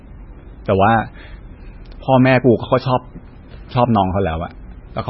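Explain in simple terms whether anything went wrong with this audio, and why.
The speech sounds dull and watery from start to finish, with a swirly, metallic edge and nothing above about 5.6 kHz. That points to heavy MP3 compression, likely squeezed too hard, so the treble was cut off and quiet details flicker in and out.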